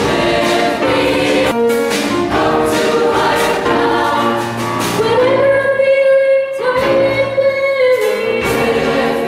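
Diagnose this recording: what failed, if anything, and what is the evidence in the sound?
Both faults sit in the network receive path, at the jitter buffer. At 1.51 s there is a skip ahead: playback jumps forward with no fill inserted, and roughly a second of audio is simply missing. The two sides of the cut are butted together almost directly, so the sound lurches instead of pausing. This fits the buffer discarding a backlog that had built up behind delayed packets, dropping about a second of latency in one step.

Two jitter buffer speed-up passages follow. From 3.47 to 4.15 s the audio runs at 157% of normal speed while the pitch stays put, so it sounds clearly rushed. Roughly 0.4 s is trimmed there. From 5.00 to 7.47 s a gentler 105% squeeze removes about a tenth of a second and sounds slightly hurried. In both, the receiver is repeatedly cutting out short pitch-period segments to drain excess buffered audio and reduce delay.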